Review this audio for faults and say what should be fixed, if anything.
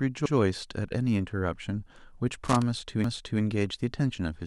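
Repeated frames at 0.26 to 0.35 s and 3.04 to 3.42 s: compressed blocks are played twice, adding about 93 ms and 372 ms, which fits one and four frames. Prevent this by checking frame sequence numbers during writing or transmission.

Loose connector crackle from 2.45 to 2.62 s: a worn or dirty contact chops the signal intermittently, producing a short scratchy burst. Prevent this by cleaning or replacing the cable and connector.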